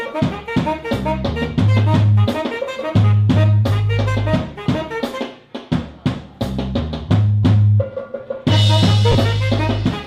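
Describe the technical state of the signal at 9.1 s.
At 9.12 to 9.15 s there is a gap of lost LE Audio frames lasting 30 ms, consistent with about three 10 ms LC3 frames. The decoder fills the hole by repeating the last good spectrum with randomised signs, so tonal content briefly smears into a noisy wash.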